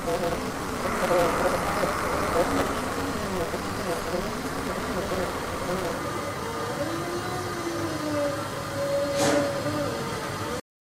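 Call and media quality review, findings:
Buzz near 188 Hz over 0.0–5.99 s; audio hurried about 1.88x at roughly normal pitch. Block size mismatch (truncated): upstream writes longer blocks than the next stage reads, tails discarded, consistent with a 256-sample read.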